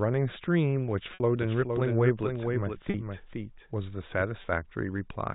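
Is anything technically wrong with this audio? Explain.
Yes. This telephone-band speech has two faults.

Packet loss with pitch repetition at 1.14–1.20 s, 2.90–2.94 s and 4.42–4.44 s: the last pitch period is repeated across each gap, giving a brief held, buzzy tone.

Doubled audio track from 1.42 to 4.22 s: a full-band copy about 5 dB quieter trails by roughly half a second, likely from a second capture path. It starts and stops abruptly.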